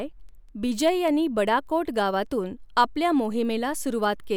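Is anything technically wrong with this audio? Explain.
Yes. From 0.29 s to 4.24 s the speech carries word clock ticks. These are sharp clicks at a steady rate of about five per second, roughly twenty in all, and their strength is uneven. They point to a digital link read by a device running on its own clock rather than locked to the sender's. The two clocks differ by something like 100 ppm. Each time they slip past each other, one sample is dropped or repeated, and that slip produces a tick.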